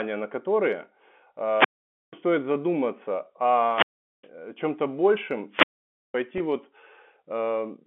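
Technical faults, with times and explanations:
1.48 to 2.19 s, 3.65 to 4.30 s and 5.50 to 6.17 s: wireless microphone squelch dropout. Each time the radio link from the analogue FM microphone weakens, hiss and static rise in the background, and then the receiver's squelch closes and mutes the output. That leaves a gap of near silence lasting about 490 ms, 410 ms and 520 ms respectively, after which the carrier recovers, the squelch reopens and the speech comes back.
6.38 s: packet loss with pitch repetition. A gap of about 20 ms, which fits a single lost packet over the 64 kbps G.711 mu-law telephone path, is filled by the receiver's concealment. It repeats the last pitch period of the speech across the hole, so the moment is heard as a briefly held, buzzy tone rather than a click or a silence. The gap is too short for the repetition to fade out.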